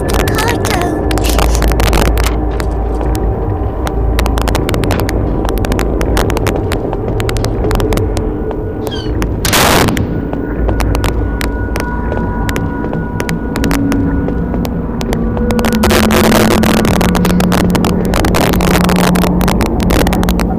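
Integer overflow runs throughout. Loud peaks driven about 9 dB over wrap to the opposite sign, not limiting. A small fraction of samples crack violently, sharper than clipping.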